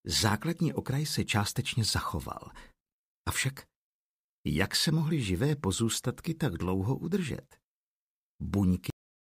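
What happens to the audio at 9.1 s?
By 9.1 s the audio has already stopped dead: a cut-off end at 8.90 s drops mid-sound into digital silence with no decay, because the final buffers were never written.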